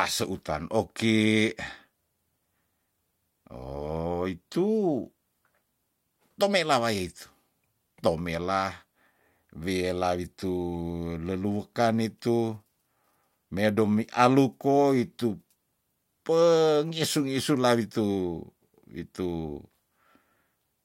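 No faults are audible anywhere in this speech recording.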